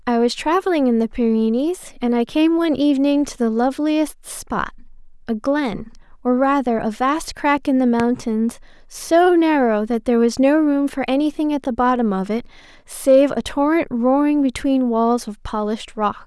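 At 8.00 s, lasting until about 8.03 s, a single loud pop lands on top of the speech, which carries on unbroken beneath it. A sudden voltage step or pulse entering the chain, likely from a plug, switch or static discharge, was shaped by the following circuitry into a sharp thump standing roughly 15 dB above the surrounding level. On a waveform it shows as one tall, narrow spike; on a spectrogram, as a thin vertical stripe spanning the full frequency range.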